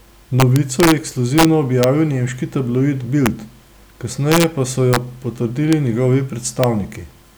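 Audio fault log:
0.40 to 6.64 s, integer overflow: speech peaks wrap instead of limiting at 0.40 to 0.92, 1.38 to 1.45, 1.83, 3.26, 4.32 to 4.44, 4.93 to 4.96, 5.73 and 6.64 s. The longer spans are driven about 2 dB past full scale; the single clicks sit right at the limit. Each excess sample jumps to the opposite extreme of the integer range, so loud syllables produce violent cracks far harsher than the flattened tops of ordinary clipping.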